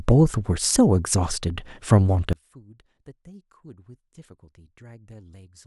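One channel inverted, from 2.33 s to the end at 5.66 s: the speech drops by about 27 dB and turns faint, as though most of it has been hollowed out. The likely cause is one stereo channel with reversed polarity, so when left and right are summed to mono the centred speech and low end cancel, leaving only the small difference between the two channels as a weak residue.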